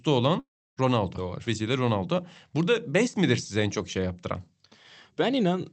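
A long network dropout likely stopped the audio arriving from 0.39 to 0.79 s. The receiver stretched the last sound into a brief fading buzz, then about 0.3 s of silence, and the speech resumed over the Opus path's 8 kHz band with that stretch lost.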